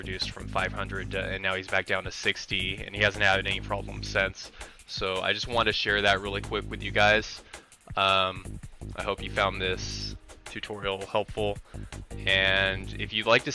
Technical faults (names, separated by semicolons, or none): none